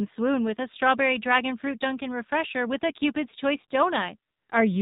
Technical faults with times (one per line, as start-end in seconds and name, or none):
0.00-4.81 AMR narrowband mobile codec
4.32-4.50 AMR comfort noise